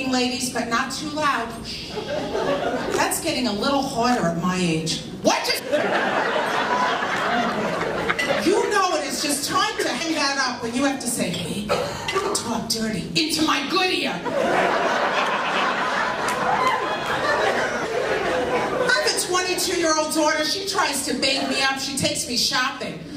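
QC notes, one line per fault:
5.58–5.60 s, compressed frames skipped: the audio leaps ahead about half a second, pointing to roughly twenty whole frames lost in decoding.
10.00 s, compressed frames skipped: the sound jumps forward roughly 150 ms, consistent with several missing or rejected frames.
11.44–11.46 s, compressed frames skipped: another join where roughly 150 ms of audio vanishes, fitting several dropped frames.
17.83–17.85 s, compressed frames skipped: playback skips ahead roughly 200 ms, suggesting a handful of frames missing or discarded as damaged.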